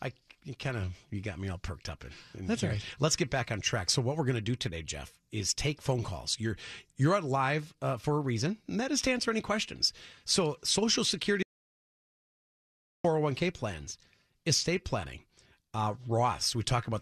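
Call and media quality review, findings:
Tiny skip at 9.07 s, just after "reason and that is" and before "answer any questions"; a second at 11.06 s. Overlap between stream segments: the two events fall 2 s apart, matching the segment boundaries. The player trims overlapping time stamps and discards real audio, about 6 ms at 9.07 s and about 17 ms at 11.06 s, so the waveform jumps.

Sound cuts out to dead silence from 11.43 to 13.04 s, about 1.6 s, with no room tone, resuming at "plans estate planning uh". Audio dropout to silence, likely from the input link or device failing while the encoder kept writing silence. The content in the gap is lost.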